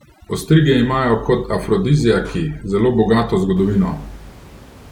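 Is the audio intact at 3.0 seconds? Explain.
No. At 3.0 seconds the clip is inside a stretch of overdone noise removal running from 0.0 to about 3.57 s. The reduction was set so hard that any frequency band sitting near the estimated noise floor is pulled far down or cut out, and the quieter parts of the speech go with the noise. Between phrases the room noise, which sits about 23 dB under the speech, collapses to near silence with twinkling specks. On a spectrogram the background looks emptied out apart from scattered isolated bright dots, and the weaker harmonics and fricative energy look ragged and patchy.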